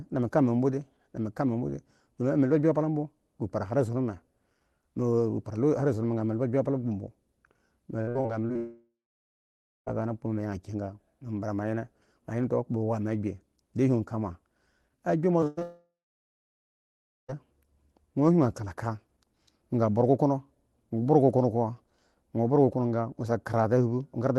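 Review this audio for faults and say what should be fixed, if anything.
Between 8.01 and 8.57 s there is repeated packet loss with a robotic sound. Five separate gaps, the longest 59 ms, total about 200 ms of missing audio. Each hole is patched by extending the preceding sound, and the next hole arrives before the patch has settled. About 35% of that half-second is synthetic fill, which gives the choppy, metallic texture with fragments dropped.

Two long network dropouts follow. The first runs from 8.57 to 9.88 s, about 1.3 s of audio lost. The last sound is stretched briefly into a fading buzz or hiss, then roughly 0.96 s of silence remains until the signal returns further along, with the intervening material gone. The second runs from 15.63 to 17.30 s, about 1.66 s lost, including roughly 1.4 s of silence. The likely cause in both cases is a stall in the network path rather than isolated packet drops.

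Two short concealed packet losses occur, at 15.40–15.46 s and at 15.59–15.63 s. Each removes about 20 ms. The decoder continues the prior waveform, or shaped noise for unvoiced sound, then cross-fades back. The result is a brief smear or wobble. The first instance also shifts the timing slightly, adding around 15 ms.

A burst of packet loss sits between them, at 15.47–15.59 s. About 100 ms of consecutive packets failed to arrive in time. The receiver holds the last sound and attenuates it across the gap, producing a decaying buzz or hiss. Playback then resumes past the lost section.

To prevent these faults, stabilise the network link and enable Opus in-band FEC with a larger adaptive jitter buffer, so bursts are recovered rather than concealed.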